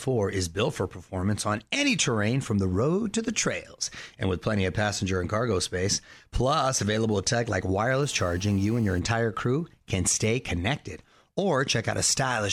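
GSM phone buzz runs from 8.03 to 9.00 s, between "plus available tech like" and "crew can stay connected". A nearby 2G phone's transmit bursts, rectified by the audio circuitry, produce a steady, raspy 217 Hz buzz rich in harmonics, sitting about 26 dB below the speech.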